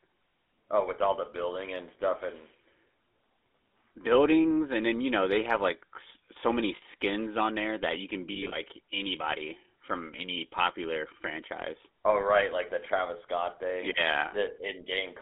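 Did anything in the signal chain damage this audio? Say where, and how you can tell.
Yes. The damage happens at the codec stage. The speech has passed through the GSM full-rate codec, which models the vocal tract and drives it with a coarse, regularly spaced pulse excitation. The coding damage is plainly audible as a buzzy, gravelly roughness on the speech. The band is confined to roughly 250 Hz to 3.5 kHz, and that narrow phone-line sound and texture fit the 13 kbps full-rate codec.

The network stage adds lost GSM frames. The decoder covers each missing frame by repeating the last good frame's settings, so the sound hangs as a brief rough, metallic ring instead of cutting out. This happens at 6.76–6.83 s (60 ms, which fits three 20 ms frames) and at 14.28–14.33 s (40 ms). At 8.32–8.55 s, about 140 ms of losses are scattered across 200 ms in short runs of a few tens of milliseconds.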